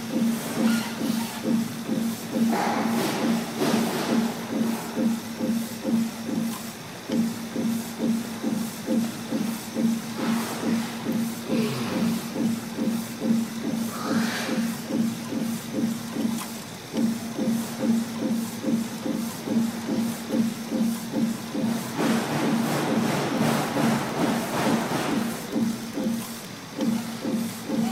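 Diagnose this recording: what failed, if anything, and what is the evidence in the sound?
Wi-Fi interference entered at the analogue wiring stage. From 23.31 s to 26.49 s a steady ticking runs under the sound at close to ten ticks per second, sitting roughly 25 dB below the signal. The spacing matches a 102.4 ms beacon interval. A nearby Wi-Fi radio's transmissions were picked up by the cabling or input circuitry and rectified by a nonlinear junction, so each beacon burst demodulates into an audible click.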